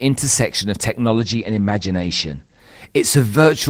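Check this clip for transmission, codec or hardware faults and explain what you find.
One fault is present. From 1.08 to 2.67 s there is a call bitrate drop. Speech turns muffled and watery as the encoder, starved of bits (which fits a fall from 32 to 14 kbps), cuts the bandwidth to 8 kHz. Unlike packet loss, the sound never breaks off.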